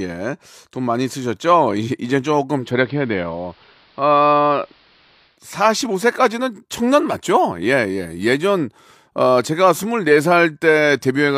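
At 2.55 s the speech cross-fades, over about 0.2 s, into the AM analogue broadcast. This is digital radio blending to analogue. The receiver lost its digital stream and fell back to the station's AM feed, so the treble is cut and a steady hiss comes up, roughly 35 dB below the speech. The level does not change. On a spectrogram the upper band goes empty and a faint noise floor fills in. At 5.42 s the digital sound blends back in.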